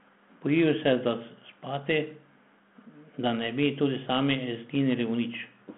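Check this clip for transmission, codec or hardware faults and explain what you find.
Nothing found: the speech is confined to a telephone band of about 150 Hz to 3.5 kHz, with nothing above 3.9 kHz, consistent with a G.726 link at 32 kbit/s working as designed.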